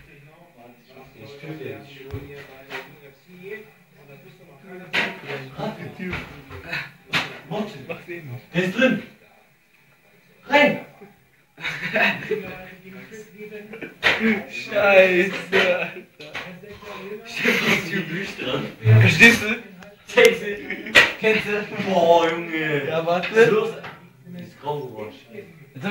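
No faults detected anywhere in the recording.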